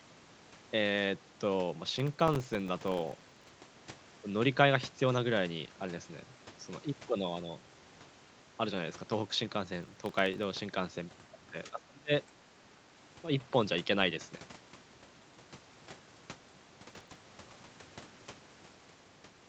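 Speech with processor overload crackle in two bursts, from 1.90 to 3.49 s and from 9.83 to 10.43 s. The processor misses many short audio deadlines in a row, each for a buffer of well under a millisecond, and each miss leaves a tiny silent hole with hard edges. The result is a gritty tearing over the voice. On a waveform, the bursts show as dense notches of silence. On a spectrogram, they appear as thin vertical broadband streaks that reach up to the 8 kHz ceiling of the Opus call audio and stop when the load clears. The voice then dips sharply from 11.65 to 12.34 s, falling by about 30 dB at its deepest, and dips again briefly by about 5 dB from 12.76 to 12.82 s. These drops are likely speech suppressed in double talk, where the echo canceller turns the talker down while the far side is also speaking. On a waveform, the envelope visibly caves in. On a spectrogram, the harmonics fade or break into gaps without any streaking.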